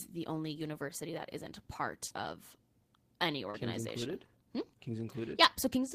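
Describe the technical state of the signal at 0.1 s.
Nothing is wrong with the signal at 0.1 s; the audio is intact at that point.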